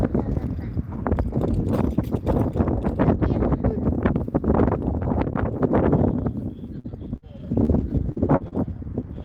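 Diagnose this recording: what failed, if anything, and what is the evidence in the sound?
From 6.79 s to 8.54 s the sound turns choppy, with six short holes where material drops out and is papered over by a stretched continuation; the longest lasts 58 ms. This is repeated packet loss (robotic sound) at the network stage. Packets kept arriving late or not at all, and the receiver filled each hole by extending the last good audio. About 15% of the stretch is concealed this way.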